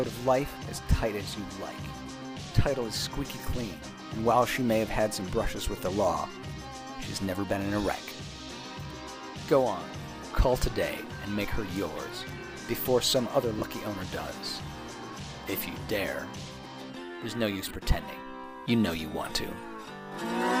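At 13.59 s there's a brief dropout of lost LE Audio frames, about 30 ms, then another at 17.68 s, about 23 ms. The LC3 decoder covers each gap by replaying the last spectrum with scrambled signs, so you hear a short noisy smear in place of clean sound.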